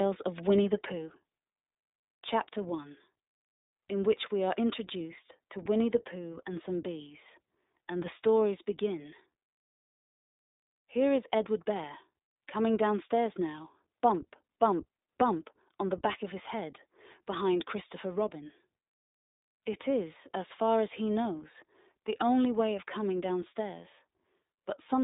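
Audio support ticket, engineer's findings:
Speech narrowband and slightly rough, synthetic-edged throughout; nothing above 3.8 kHz, thin lows below 250 Hz. iLBC codec: each short frame's excitation coded independently, consistent with 20 ms frames near 15 kbps, so plainly audible coding grit.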